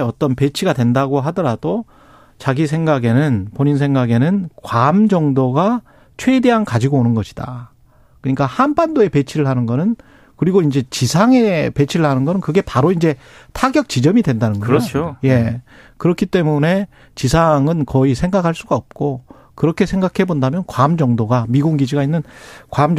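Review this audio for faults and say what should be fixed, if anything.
Nothing in this speech recording needs fixing. With no fault present, there is no prevention step to recommend.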